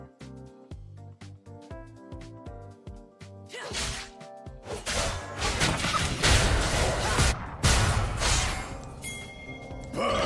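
Nothing in this recording stood out on listening.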